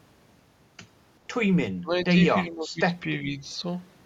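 The speech drops three times. From 1.8 to 1.98 s and again from 2.47 to 2.8 s it falls by roughly 20 dB. From 3.07 to 3.42 s it dips only slightly. This is likely speech suppressed in double talk: with both sides talking at once, the echo canceller mistook the near talker for loudspeaker echo and turned the speech down along with it.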